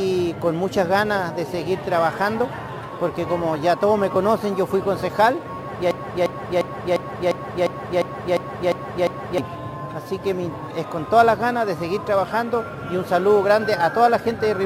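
The audio hits a broken-record loop from 5.91 to 9.38 s. A fragment of about 351 ms repeats exactly, back to back, ten times. The material that belonged in that stretch is gone. The likely cause is a stalled player, encoder or stream resending its last buffered fragment.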